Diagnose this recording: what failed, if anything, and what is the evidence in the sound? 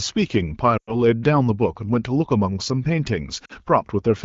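At 0.77 s the speech drops to near silence within two frames and stays low for about 0.18 s before resuming at 0.96 s, and a shorter warble and dip sits between 3.45 and 3.52 s. These are lost AMR speech frames on the radio link into the AMR-WB decoder. Frames failed their checksum, so the decoder repeated the last good pitch and vocal-tract settings at falling gain, which fits about 100 ms and 40 ms of concealed audio respectively.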